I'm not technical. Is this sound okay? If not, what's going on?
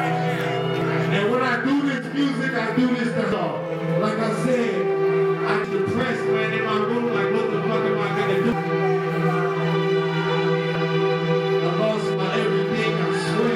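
No. There are five brief glitches, at 0.82, 3.32, 5.64, 8.52 and 10.75 seconds. Each is a short chirp or blip. The cause is damaged data in a compressed stream. The file is stored in a squeezed, compressed form. At these points, some of that stored data got corrupted. The player can't read those pieces properly. It loses its place and hunts for the next good chunk, and that stumble makes the chirp.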